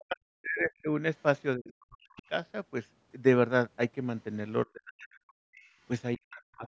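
From 0.0 to 0.9 s the speech is suppressed in double talk, dipping by up to about 40 dB, likely because the echo canceller turned down both sides while they overlapped. From 1.21 to 2.22 s the other side's voice leaks through about 25 dB below the speech, likely echo left behind by the canceller, and within that stretch, from 1.56 to 2.23 s, the speech again drops sharply. The same pairing recurs: suppression from 4.66 to 5.46 s with leakage from 5.0 to 5.7 s, then suppression from 6.16 to 6.68 s with leakage from 6.37 to 6.68 s.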